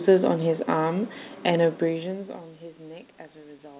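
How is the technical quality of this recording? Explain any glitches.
Nothing here counts as a glitch; what you hear is simply the narrow, phone-like band of a call connection, with nothing above 4 kHz, which fits a G.711 A-law link running as it should.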